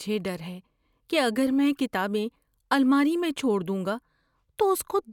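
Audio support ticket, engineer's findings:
No audible faults found on listening; nothing to attribute to any component, no action required.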